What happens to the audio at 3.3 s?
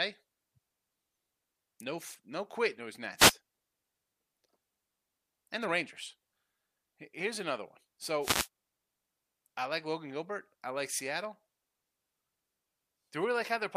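At 3.3 s the speech is caught in a wireless microphone noise hit lasting from about 3.17 to 3.34 s. The FM radio link fades briefly as reflected signals cancel the direct one, so receiver noise rises in a short swish of static. Unlike a digital dropout, which leaves silence or a hard gap, this is a hiss-like burst that swells and recedes over roughly a sixth of a second.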